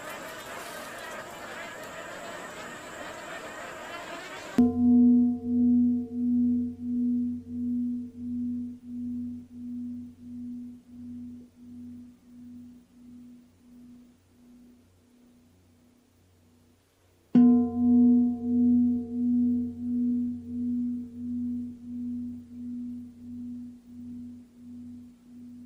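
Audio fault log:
No audible faults anywhere in this recording.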